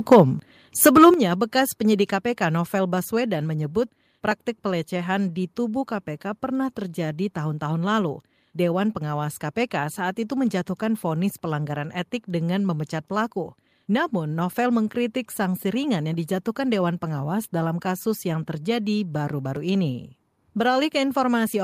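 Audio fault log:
0.11–0.2 s and 0.86–1.09 s, microphone overload: the loudest bits of speech come out harsh and crackly, with their peaks flattened. The input was likely set too hot, pushing about 6 dB and then about 5 dB past the converter's ceiling. The first burst sounds rougher, with roughly a tenth of its samples chopped flat.
0.13 s and 1.14 s, microphone volume stepped down: the speech and the background both drop in level all at once, by about 3 dB and then by about 8 dB. Each drop lands during or right after a crackly burst, which points to the call software likely turning the input down after catching those overloads.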